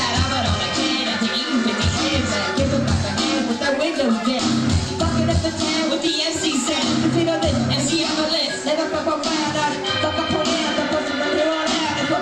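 No technical faults can be heard anywhere here.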